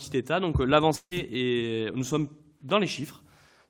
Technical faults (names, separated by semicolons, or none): long network dropout